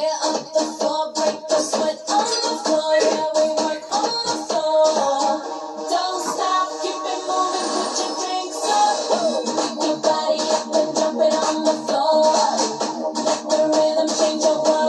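No technical faults can be heard anywhere in this audio.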